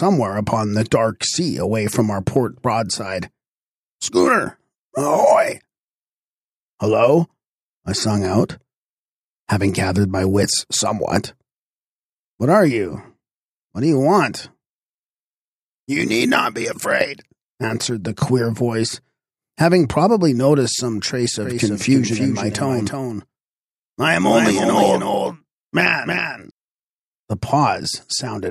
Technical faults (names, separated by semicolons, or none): doubled audio track